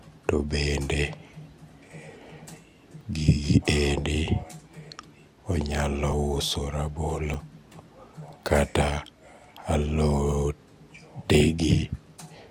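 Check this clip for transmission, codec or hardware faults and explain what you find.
Two kinds of fault are present in this speech clip: three short skips and two stretches of DAB burbling.

At 3.01 s, 6.12 s and 7.34 s the audio jumps forward, losing around 10 ms, 20 ms and 10 ms respectively, with no gap of silence. The likely cause is a dropped buffer (overrun): the software failed to read a block of samples before the hardware overwrote it, so the audio on either side of the missing block is spliced directly together, producing the discontinuity.

From 8.23 to 8.33 s and again from 11.28 to 11.64 s, the speech burbles. This is DAB burbling. At weak reception a small fraction of bits, a few tenths of a percent, passes uncorrected into the MP2 stream. The corrupted samples put short blips of noise into single sub-bands, and corrupted scale factors make sub-bands jump in level for up to a frame. 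The first burst spans only a few frames, and the second is longer.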